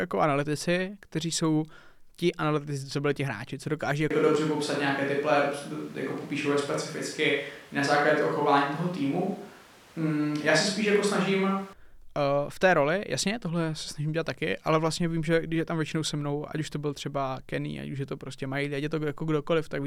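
A speech recording in which, at 4.11 s, right after "ti hráči co dokáží", the voice suddenly turns roomy and hollow, losing its low end and gaining audible background noise sitting roughly 30 dB below the speech, while the overall level stays about the same. At 11.73 s it snaps back to its close, full sound. This abrupt stretch is a switch to a distant microphone, likely because the close microphone's signal dropped out and a farther pickup, such as a camera microphone, filled in.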